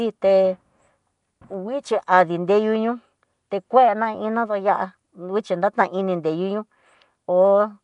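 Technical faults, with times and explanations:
throughout, Nellymoser compression: the speech has likely been through the Nellymoser Asao codec that Flash used for microphone input. It codes the audio in short fixed blocks on a tight, fixed bit budget, leaving weaker frequency bands with no bits and filling them with substitute noise. The damage is plainly audible: a rough, hissy halo clings to the speech, and the sound smears into a murky, underwater quality. Nothing reaches above 10.6 kHz, a ceiling that fits a rate of about 44 kbps.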